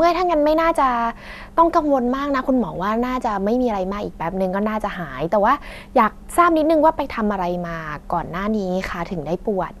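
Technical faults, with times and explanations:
Nothing to flag here; the speech comes through without any technical faults worth noting.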